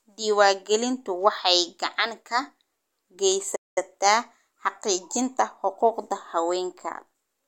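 A playback stall at 3.55 s cuts the speech to silence for about 0.21 s, until 3.78 s, before it carries on. The likely cause is the player running short of data or its output thread being blocked, so nothing reached the output until it recovered.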